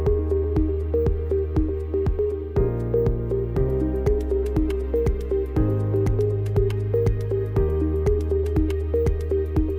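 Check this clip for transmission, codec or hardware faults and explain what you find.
One fault runs through the whole clip: crude rate conversion. A gritty, inharmonic fizz rides on the loud and high-frequency parts of the sound, roughly 35 dB beneath them. It points to a 32 kHz to 48 kHz change made by repeating the nearest sample with no filtering, so the 3:2 stepping pattern produces tones unrelated to the material.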